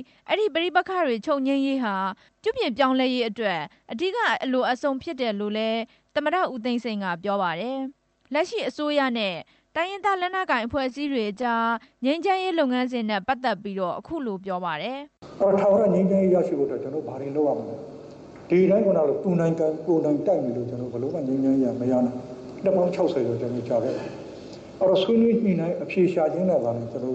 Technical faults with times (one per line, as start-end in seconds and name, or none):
10.79-11.74 repeated stalls (stutter)
12.77-13.61 jitter buffer slow-down
15.65-17.44 jitter buffer speed-up